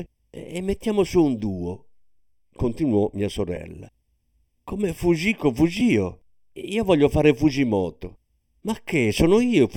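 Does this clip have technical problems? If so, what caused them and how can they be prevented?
Yes. Channel delay (comb filtering) runs throughout: one channel lags by under half a millisecond, so the mono sum cancels at fixed, evenly spaced notches starting near 1.5 kHz. Because the notches stay put rather than sweeping, it is not flanging. Align the channels before summing, or take a single channel.

Lost LE Audio frames occur at 3.56 s and 5.80 s, each a 10 ms frame that the LC3 decoder filled with a reused, sign-scrambled spectrum. Each is heard as a brief noisy smear, not a silent gap like an ordinary dropout. Improve the Bluetooth link margin or add retransmission headroom to avoid losses.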